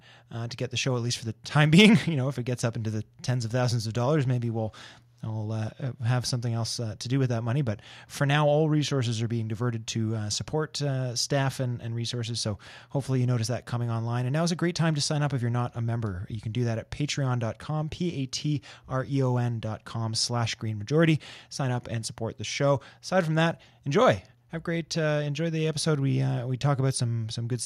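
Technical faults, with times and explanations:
No technical faults can be heard in this speech recording. There is nothing here that needs a time or an explanation.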